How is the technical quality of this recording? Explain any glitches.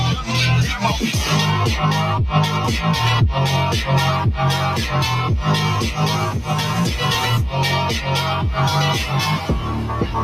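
The recording is compromised throughout by one fault. Across the whole clip, sustained parts of the sound and their tails keep dipping by around 5 dB while attacks come through intact, so it pumps and thins. This is a noise suppressor applied to music or sounds: a speech-tuned suppressor mistakes held tones and ambience for noise and pulls them down.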